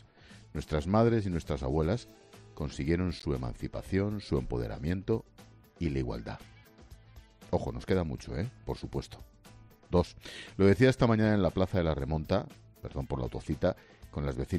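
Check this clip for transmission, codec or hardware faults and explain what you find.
One fault is audible, a corrupt frame decoded. It runs from about 3.19 to 3.25 s, roughly 50 ms. Some bits in the compressed data were flipped. The decoder played those frames anyway, apparently a few in a row. Misread gains and codes placed energy at the wrong frequencies. The result is a short chirp, squeak, blip or burst of noise, peaking around -35 dBFS. It lasts only as long as the damaged frames.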